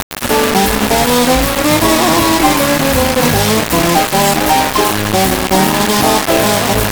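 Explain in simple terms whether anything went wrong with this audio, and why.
From start to finish the audio sounds harsh and grainy, with the grit nearly as loud as the sound itself and changing as it changes. The likely cause is low bit depth without dither: the signal was rounded to only about three bits.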